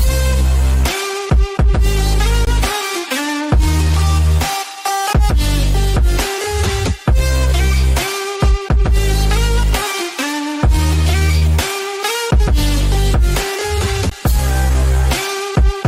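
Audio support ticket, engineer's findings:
Block of digital silence, 2.45–2.47 s and again at 14.1 s: 20 ms holes, hard cut to silence. Output buffer probably not filled in time.

Short stall from a late packet, 11.19–11.24 s and 11.39–11.45 s: sound held about 26 ms, nothing lost. Jitter buffer ran dry; delay grew 26 ms each time.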